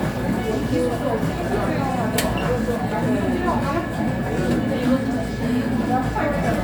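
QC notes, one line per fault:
Nothing stood out on listening to the recording.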